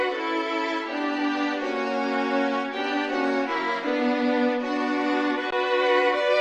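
Around 5.51 to 5.53 s there's a gap between stream segments: the segment timestamps leave about 18 ms unfilled, so the player drops in a hard-edged hole of silence.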